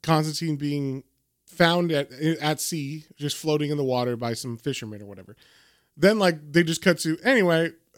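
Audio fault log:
No technical faults can be heard in the speech; the signal stays continuous and stable throughout.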